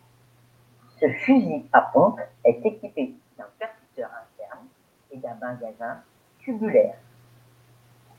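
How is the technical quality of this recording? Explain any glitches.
One glitch stands out: an automatic gain rise. From 5.1 to 6.94 s, right after "d'un percuteur interne", the voice and the room noise behind it swell together by about 3 dB. The input level had dropped by about 18 dB, so the automatic gain control gradually pushed its gain up to compensate, lifting everything at once rather than the voice alone. The level shifts around 2.5 s and 6 s come from the talker moving relative to the microphone.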